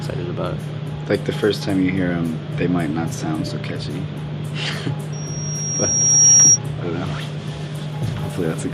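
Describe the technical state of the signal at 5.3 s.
At 5.3 s you're right in the early swell of a loudspeaker feedback squeal, running from 5.12 to 6.59 s. The mic is hearing its own speaker, and a 5.6 kHz tone runs away over about a second, ending up about 10 dB above the sound.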